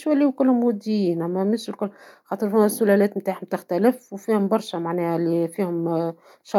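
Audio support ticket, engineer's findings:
No fault found in the speech recording. Nothing audible to attribute to any component or path.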